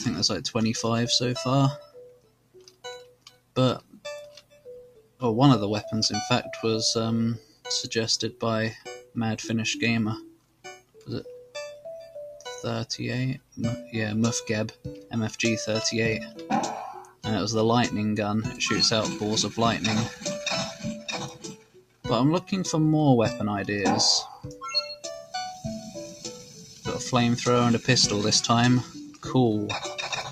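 Throughout the audio the level pumps and flutters, with held material and decaying tails sinking while sharp onsets punch through, a swing of around 10 dB. This is a noise suppressor applied to music or sounds: a processor designed for speech treats sustained tones, ambience and reverb as background noise and keeps pulling them down, so the texture thins and breathes instead of sustaining naturally. On top of that there are passages of sound cut by the noise suppressor, where steady or fading material drops well below its surroundings or has its decay chopped short. These occur at 1.81–5.22 s (down about 18 dB, for roughly three seconds of that span), 7.39–11.55 s (about 18 dB), 13.39–15.13 s (about 15 dB), 17.04–17.26 s (about 17 dB), 20.75–22.52 s (about 18 dB), 24.34–26.86 s (about 12 dB) and 28.84–30.31 s (about 16 dB). In each case the suppressor judged the sustained content to be noise and attenuated it harder than the transients around it.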